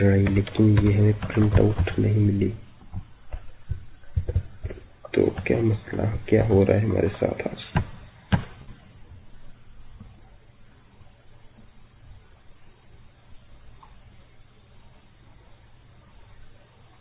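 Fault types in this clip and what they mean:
Short concealed packet loss: at 2.54 to 2.58 s, about 20 ms of audio never reached the decoder in time. The receiver covered the hole with roughly 16 ms of invented sound, extending the preceding signal's pitch or shaped noise before blending back into the real stream. The result is a brief smear or wobble rather than silence, on a call path already band-limited to 4 kHz by G.711 A-law.
Burst of packet loss: from 8.62 to 8.69 s, about 60 ms of consecutive audio was lost or arrived too late to play. The receiver filled about 52 ms by stretching the last received sound and fading it down, so the signal turns into a held buzz or a decaying hiss. It then picks up again further along, with the material from that span simply absent.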